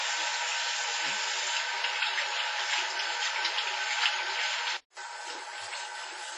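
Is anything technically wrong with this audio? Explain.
Yes, two things. The whole clip has heavy codec damage, and for the first five seconds or so the audio comes through a noticeably worse input before it clears up.

WMA compression runs throughout, likely from a low-bitrate WMA encode, perhaps around 24 kbps. A transform codec squeezed that hard smears its quantisation noise across long blocks and throws away weak spectral detail. Nothing survives above about 10.6 kHz, and what remains sounds washy and ringing, with a hiss that swells and fades along with the sound itself.

From 0 to 4.97 s it sounds like the input switched to a poorer device, likely a lesser mic or a headset's call mode. That stretch tops out around 7.6 kHz, so it's duller and boxier, with its own faint background noise sitting well under the signal. At 4.97 s there's a 200 ms dropout at the switch, then the band opens up and the level shifts by about 5 dB.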